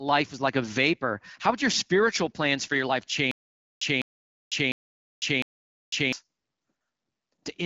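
Speech clip with a stutter with silent gaps from 3.31 to 6.13 s, right after "plans for your life". A 203 ms fragment repeats four times, each followed by 500 ms of digital silence. The likely cause is a stalled stream replaying its last fragment, so the intervening audio is lost.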